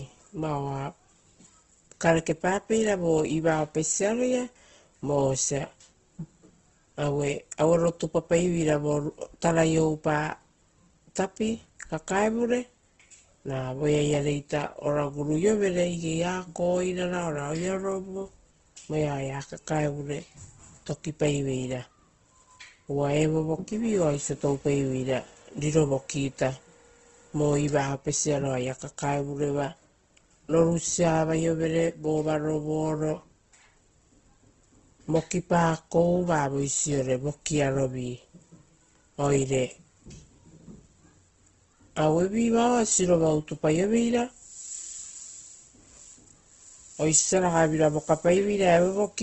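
Throughout the speech, everything above about 8.1 kHz is missing and the sound is noticeably grainy and rough, with a noisy texture. That points to likely Opus compression in its CELT music mode, filling starved bands with noise, at a low bitrate around 16 kbps.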